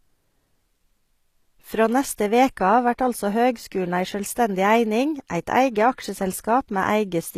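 Throughout, the s sounds turn gritty and lispy, with nothing above 14.9 kHz, likely HE-AAC compression at a low bitrate rebuilding the treble from copied lower bands.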